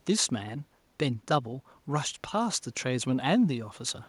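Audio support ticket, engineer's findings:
No faults found. Room noise about 42 dB below speech.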